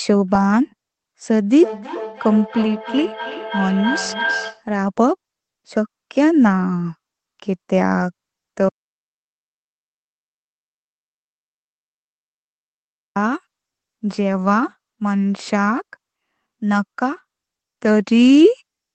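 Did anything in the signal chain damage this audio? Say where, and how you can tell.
Yes. From 1.49 to 4.69 s there is a feedback howl in the call loop: two devices in one room feed each other, and each round trip adds gain. It is a tone near 1.5 kHz that pulses about every third of a second and rises to about 8 dB below the speech.

From 8.69 to 13.16 s there is an audio dropout to silence lasting 4.47 s. The input was likely lost at the capture device or link while recording continued. It is silence with no room tone, unlike network loss, where concealment leaves buzzy, smeared fill.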